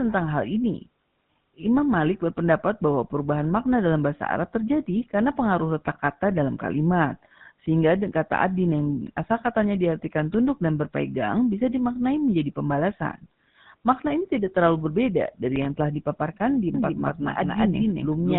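From the start the speech carries the buzzy, gravelly roughness of the GSM full-rate codec, plainly audible throughout. Because the codec rebuilds the voice from a vocal-tract model driven by a sparse train of pulses, it leaves a grainy rasp rather than the watery, swirling artefacts of a modern transform codec. Everything above 4 kHz is missing, and the damage fits a low rate of around 13 kbps.

From 16.74 s to the end, a doubled audio track appears: a second, equally loud copy of the speech trails the first by roughly a fifth of a second. The likely cause is the same audio reaching the mix twice through paths of different speed. Unlike a room echo, the copy has no decay or reverberant colour and keeps the full band. It cuts in abruptly, producing a clean, stuttering double rather than a tail.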